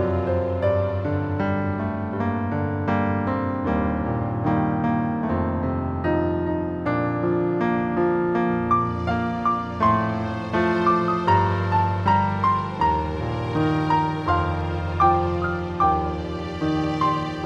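No technical faults can be heard anywhere in this clip.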